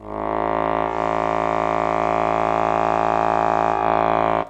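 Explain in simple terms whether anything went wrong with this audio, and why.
Digital radio blending to analogue, from 0.83 to 3.88 s: the radio lost its digital signal and faded, over about 0.18 s, to the station's FM broadcast. The music becomes slightly quieter, with faint hiss, until the digital signal returns.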